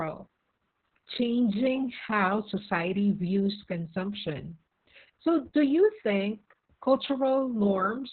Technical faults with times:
0.00-8.13 Opus voice compression

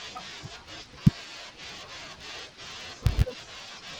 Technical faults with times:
0.00-4.00 filter restarted on every block

